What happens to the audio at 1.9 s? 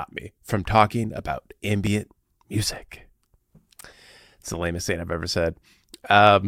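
At 1.87 s the speech skips forward, losing only about a millisecond and a half, likely a dropped buffer (overrun) whose samples were overwritten before being read, so the two sides abut. The waveform shows an abrupt step and the spectrogram a thin vertical broadband line.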